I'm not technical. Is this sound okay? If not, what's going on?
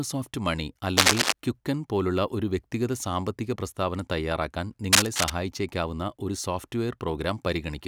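No. Cable scratch noise at 0.97–1.33 s, just before "ക്വിക്കൻ", and at 4.93–5.30 s, right after "വ്യക്തിഗത സാമ്പത്തിക പ്രസ്താവന തയ്യാറാക്കാൻ": loud scratchy bursts over the speech, likely from a worn cable or connector being moved.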